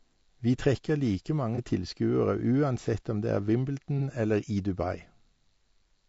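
Throughout, the speech carries a rough, grainy texture with noise between the harmonics, likely from low-delay AAC compression (AAC-ELD) at a low rate, which fits about 32 kbps.

At 1.55–1.59 s and again at 3.98–4.02 s, AAC frame loss with concealment makes the decoder patch a gap that fits a single lost frame, leaving a brief smeared, noisy blur.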